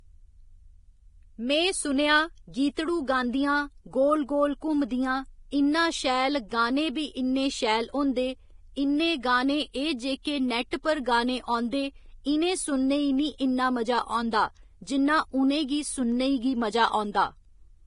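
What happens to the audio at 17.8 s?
At 17.8 s the speech carries the same damage heard from the start of the clip to its end. It is most likely Vorbis compression, heavily applied. Nothing sounds above 10.5 kHz, so the top of the spectrum is cut away. The remaining treble is quantised so coarsely that its fine detail turns into noise of similar energy. The sound is hissy and grainy, with roughened tones and blurred onsets. This fits a bitrate near 28 kbps.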